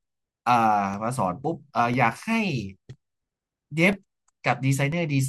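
Periodic USB or driver dropouts from 0.94 to 4.92 s: roughly every 1.0 s, about 2 ms of the speech drops to silence, heard as regular ticks.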